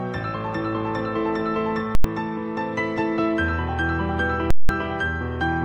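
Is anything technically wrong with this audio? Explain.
Yes. Invalid numbers at full scale appear from 1.95 to 2.04 s and from 4.51 to 4.69 s. Infinite or invalid values were pinned to the largest positive or negative value, so the output sits flat at one extreme value for 93 ms, then 186 ms (fitting 4096- and 8192-sample blocks). Each is heard as a loud pop at the start and end with silence between. Clipping would still carry the sound underneath, and a single click has no silent gap.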